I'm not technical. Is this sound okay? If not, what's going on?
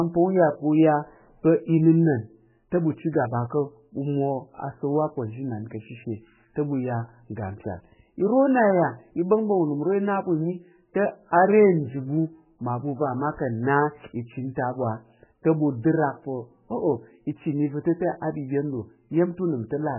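No. Throughout the whole recording, a block size mismatch (padded) means one part of the system hands over shorter chunks than the next part expects, fitting a 1024-sample read, and fills each gap with silence. That adds a steady buzz at about 47 times per second and slows the speech by about 0.1%, too little to notice.

The speech was also likely squeezed hard by MP3 compression, which discards detail it judges unimportant. Here the damage is heavy: nothing remains above 3 kHz, so the voice sounds muffled, and discarded detail leaves a watery, swirly quality with smeared consonants.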